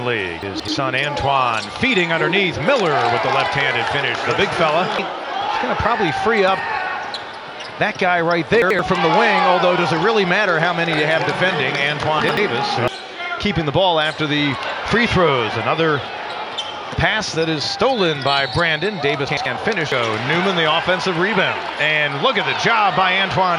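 Four spots of chunks out of order, at 0.43 to 0.68 s, 8.62 to 8.79 s, 12.20 to 12.37 s and 19.29 to 19.46 s. Each time a block of about 85 ms lands late and plays after its neighbours. It's two blocks late in the first spot and one in the others. Nothing goes missing, but the shuffle makes a brief jumbled stutter.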